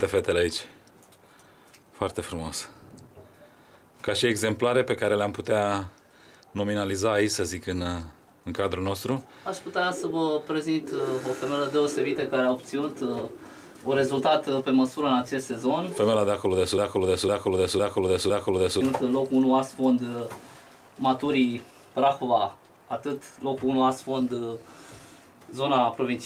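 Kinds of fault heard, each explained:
Clock drift between sender and receiver: The sending clock runs about 4 percent faster than the receiving one. The receiver's buffer keeps overfilling, so it must throw away small slices of audio. Small timing hiccups recur at uneven intervals across the whole clip.
Repeated timing corrections: From 0.03 s to 26.13 s the receiver trims short pieces to keep up with the fast sender. The net effect plays the audio at 104 percent speed. Each cut is slight, heard as brief stumbles and an unsteady pace.
Broken-record loop: From 16.78 s to 18.81 s a 0.51 s fragment repeats exactly, back to back, four times. The cause is likely a stall that kept resending the last held piece. The audio that belonged in that span is missing.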